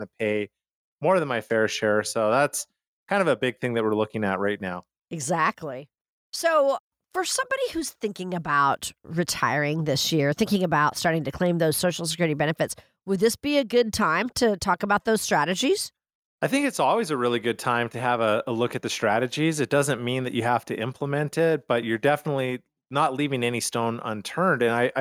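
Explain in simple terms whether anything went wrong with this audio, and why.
Nothing went wrong; no faults can be heard here.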